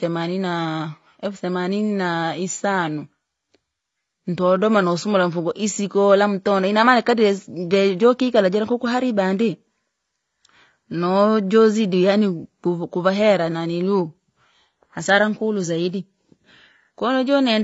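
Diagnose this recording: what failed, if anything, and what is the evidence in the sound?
The damage sits at the codec stage and runs through the whole clip. Nothing is heard above about 7.5 kHz, so the speech sounds dull and closed-in. The codec damage is plainly audible. Sibilants turn fizzy and smeared, and sustained sounds take on a warble. The likely cause is AAC compression, as AAC-LC at a low bitrate. The encoder cut the top band and coarsely quantised what remained. The damage fits a bitrate around 24 kbps.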